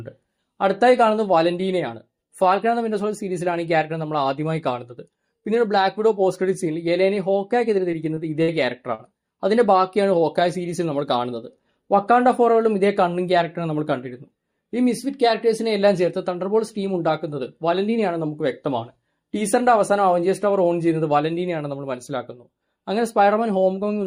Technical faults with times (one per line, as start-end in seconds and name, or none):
7.91-8.18 short concealed packet loss
8.42-8.55 burst of packet loss
8.95-9.01 short concealed packet loss